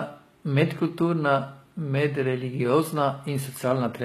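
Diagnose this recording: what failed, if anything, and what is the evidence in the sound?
Codec stage, likely HE-AAC compression. Throughout the speech, the top end sounds synthetic. S sounds come out gritty and metallic, and nothing sounds above 14.9 kHz. The treble is rebuilt from copied lower bands, which fits a low bitrate around 20 kbps.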